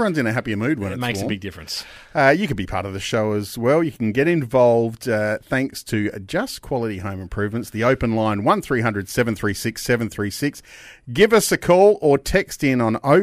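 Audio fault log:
0.11–13.22 s clock slip clicks: a soft, evenly spaced rattle about every 30 ms under the speech, likely from unsynchronised device clocks drifting several hundred ppm, unlike irregular crackle.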